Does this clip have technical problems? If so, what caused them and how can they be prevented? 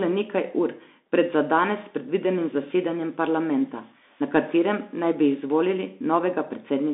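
Yes. Throughout the clip the speech sounds thin and boxed in, with no low body and nothing bright on top: the band runs from about 250 Hz to 3.6 kHz. Sibilants turn scratchy, louder syllables rasp, and a grainy hiss sits beneath everything. This is the Bluetooth CVSD headset codec. It sends one up-or-down bit per sample, which fits a 64 kbps stream, and its adaptive step can't keep pace with sharp, loud changes, so those changes distort. Recording with a wired microphone, or with a headset using a wideband mode such as mSBC, would prevent it.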